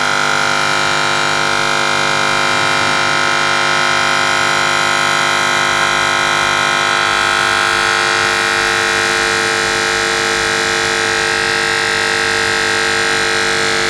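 Nothing stood out on listening to this audio.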